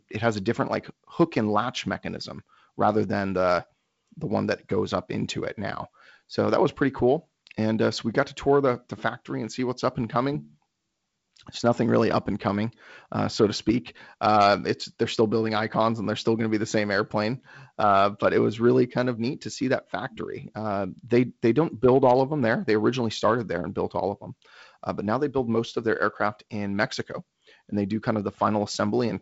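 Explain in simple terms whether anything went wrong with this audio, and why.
Nothing went wrong: the speech has come through G.722 wideband telephone coding, which stops the sound at about 7.7 kHz and adds a faint coding hiss, exactly as that kind of call line is meant to behave.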